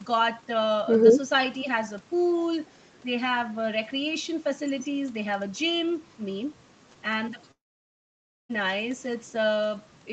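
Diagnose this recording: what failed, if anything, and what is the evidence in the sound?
At the network stage, the speech stops from 7.51 s to 8.51 s, a long network dropout, likely packet loss that left about 0.98 s never delivered. The receiver's concealment briefly extends the last sound as a decaying buzz or hiss, then about 0.92 s of near-silence follows before speech resumes with the lost stretch skipped. On a waveform this is a flat gap after a short tapering tail; on a spectrogram, a dark vertical band across all frequencies up to the 8 kHz ceiling.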